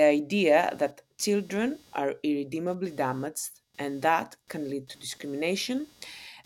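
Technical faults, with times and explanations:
Throughout, computer activity noise: a faint buzzing chatter pulsing roughly 200 times a second sits about 35 dB below the speech. It follows the machine's processing load rather than the talking, because load currents disturb the audio circuit's shared ground.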